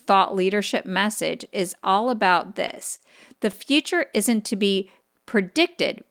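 Packets reached the receiver late or more slowly than they were played in this speech clip, so its jitter buffer drained repeatedly between 2.55 and 3.01 s, just after "message is all about". Each time, the receiver stretched the last sound to cover the wait, giving four brief hitches that total 59 ms, the longest 34 ms, about 13% of that stretch. Nothing is lost, but the repeated stalls (stutter) make the phrase drag and catch.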